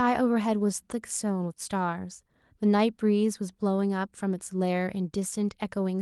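No technical faults are audible anywhere in the speech clip.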